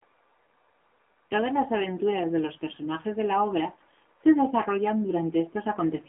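Speech carried through the AMR narrowband mobile codec for its whole length, with plainly audible coding damage: a buzzy, synthetic edge from the pulse-excited vocal-tract model, and a telephone band of about 250 Hz to 3.5 kHz with nothing above 3.8 kHz. The coarseness fits a low mode around 7.4 kbps.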